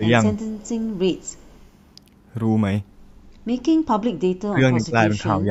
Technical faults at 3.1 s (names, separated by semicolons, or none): none